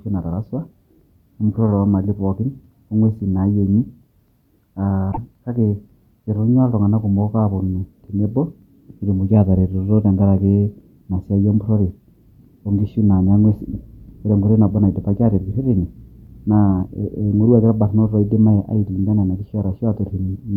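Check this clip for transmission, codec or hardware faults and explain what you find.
One codec fault appears in this speech clip. From 5.11 to 5.18 s the audio garbles for a moment and skips ahead. The likely cause is a broken MP3 bit reservoir: after lost frames, the next roughly 26 ms frames reach back for borrowed bytes and decode data from the wrong frame.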